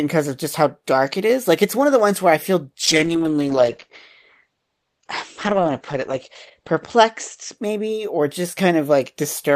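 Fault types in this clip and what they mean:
Call bitrate drop: after "ones where I feel" the encoder starves. Audio turns rough and muffled, highs cut near 8 kHz, fitting roughly 9 kbps, until "maybe or".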